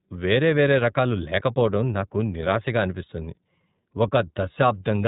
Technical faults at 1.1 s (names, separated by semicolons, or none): iLBC codec